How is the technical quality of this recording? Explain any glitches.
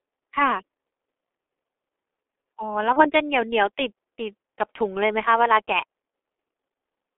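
The technical quality is poor: the whole recording carries heavy low-bitrate codec damage, and one dropout is patched over partway through.

G.723.1 codec, throughout: The speech is squeezed into a telephone band of about 300 Hz to 3.5 kHz and coded very coarsely, consistent with roughly 6.3 kbit/s. Its long 30 ms frames and slow-moving voice model leave the speech muffled and hoarse, with smeared consonants.

VoIP packet loss concealed by the speech codec, 2.93 to 3.11 s: The decoder filled the gap by extending its last pitch and spectral shape at falling gain. The result is a brief, fading smear, and the speech stays weak or distorted afterward as the decoder recovers. The gap's size points to a single lost 30 ms frame.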